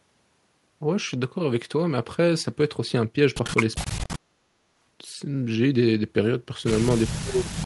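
Speech suppressed in double talk at 3.83 to 4.04 s: the speech dips by about 40 dB, likely because the echo canceller mistook simultaneous talk for loudspeaker echo. Background gated by the echo canceller at 4.32 to 4.5 s: the room sound dips by about 9 dB as the canceller clamps the microphone during loudspeaker playback, then recovers. Speech suppressed in double talk again from 7.07 s to the end: the speech sinks by about 40 dB for roughly half a second.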